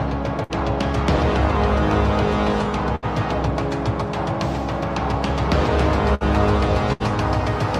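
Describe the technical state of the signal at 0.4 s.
At 0.4 s the signal runs into a burst of packet loss spanning 0.43 to 0.52 s. A run of consecutive packets failed to arrive in time, and the receiver concealed the hole by extending the last good audio for about 61 ms while attenuating it, so the sound smears into a held, decaying tail. Playback then picks up later in the stream, with roughly 60 ms of the original audio skipped.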